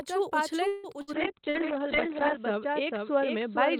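Throughout the speech a doubled audio track is present: a second full-band copy trails the original by around half a second, about 5 dB quieter, most likely from a second capture path or an edit holding two copies out of step. It adds no room colour or decay, just a clean repeat. On a spectrogram every syllable's harmonic pattern reappears, slightly fainter, about half a second later; the waveform shows each envelope shadowed by a smaller twin.

From 0.67 to 0.87 s there is a call audio freeze. Packets were likely held up in transit and the jitter buffer ran dry, so the receiver stretched the last sound into a fading continuation for about 160 ms. When the audio resumes nothing is lost, but everything after it now sits about 160 ms later. A spectrogram shows flat, smeared horizontal bands fading out rather than normal speech texture.

A burst of packet loss follows at 1.02 to 1.10 s. About 60 ms of audio disappears, and the receiver bridges the hole with roughly 57 ms of decaying continuation before jumping ahead. 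It sounds like a brief held, fading stall with a skip. On the waveform the envelope sags and then picks up again.

From 1.15 s to the end there is a call bitrate drop, from 64 kbps down to 7 kbps, holding at the lowest rate for about 1.25 s. At that rate the encoder codes far more coarsely and the audio band shrinks from 20 kHz to 4 kHz, so the speech turns muffled, rough and watery. The spectrogram shows a hard ceiling near 4 kHz with blocky, smeared energy below it.

A second burst of packet loss occurs at 1.49 to 1.58 s. Again about 60 ms goes missing, and roughly 51 ms of fading concealment fills the gap. It produces another short held, fading sound and a jump in the speech. It appears on the waveform as a decaying stretch followed by an abrupt resumption, inside the already narrowed band.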